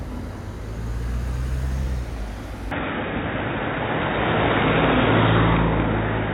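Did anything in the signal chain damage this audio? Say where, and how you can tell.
Yes, at the capture device. From 2.71 s to the end, the sound turns dull and boxy, with nothing above 3.8 kHz. The level shifts by roughly 5 dB with no gap, and a new noise floor appears, some 35 dB down. The input likely switched to a poorer device.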